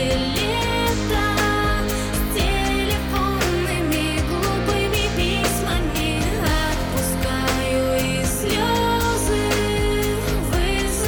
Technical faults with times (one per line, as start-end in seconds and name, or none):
8.01 dropped samples